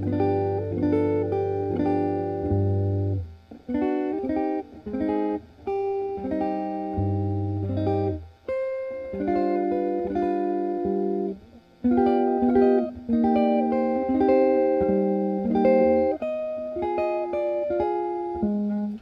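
No technical faults can be heard anywhere in the clip. Nothing in the sound points to a problem in the signal path.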